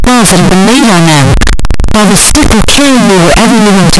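Across the whole recording, the speech appears to have been stored as 32-bit floating-point samples but likely read back as 32-bit integers, a float read as integer fault. Each sample's sign and exponent bits then dominate its value, so the waveform turns almost square, sitting at an almost fixed, high level regardless of how quiet the original was. The result is extremely loud and harsh, with background noise as prominent as the speech, though the pitch contour still comes through.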